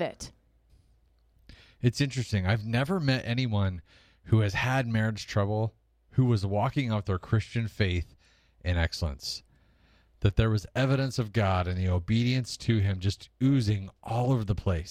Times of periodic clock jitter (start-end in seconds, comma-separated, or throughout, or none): 10.62-14.90